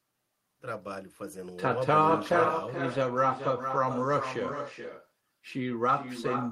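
From start to end, the speech carries echo with no canceller. A far loudspeaker feeds the microphone, returning a thinner copy about 7 dB down, roughly 0.4 s later.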